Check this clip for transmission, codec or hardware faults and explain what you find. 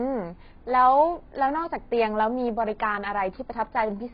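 The speech has one codec fault running the whole way through. For the full length of the clip, nothing reaches above 5.3 kHz, and the remaining band sounds heavily smeared and fizzy. This is likely AAC compression: an AAC-LC encoder short of bits lowers its cut-off and coarsely quantises the spectrum. The damage fits a bitrate around 16 kbps.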